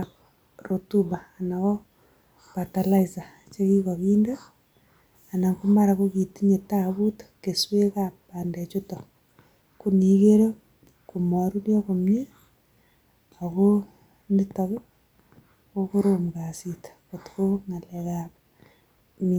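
Nothing in this recording stands out as a technical fault; it runs along without any glitch worth pointing to.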